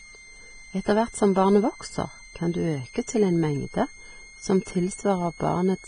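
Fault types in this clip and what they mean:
Switching supply whistle: A high, thin whistle sits under the speech for the whole clip, the kind of tone a switching power supply gives off when its regulation cycle falls into the audible range. Its pitch wanders between about 2.09 and 2.17 kHz, staying well beneath the voice, around 25 dB down. On a spectrogram it appears as a narrow horizontal line near 2 kHz that drifts slightly.
Vorbis compression: The speech sounds grainy and hissy, with smeared consonant onsets and a rough edge on voiced sounds. This is heavy damage, likely from Vorbis coding at a very low rate, one that points to something around 20 kbps. The treble has been quantised so coarsely that detail turns into noise. On a spectrogram everything stops sharply at about 9.7 kHz, and the upper bands below that show patchy, blocky texture instead of clean harmonics.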